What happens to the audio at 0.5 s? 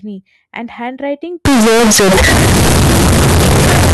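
Nothing goes wrong at 0.5 s: the speech there is intact, with no dropout, click, distortion or other fault.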